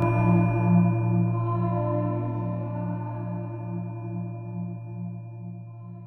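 Throughout the clip, a channel delay produces comb filtering. One channel lags by roughly 20 ms before the two are summed to mono, so the sound turns rough and slightly doubled. A spectrogram shows fixed, evenly spaced dark notch bands starting near 20 Hz.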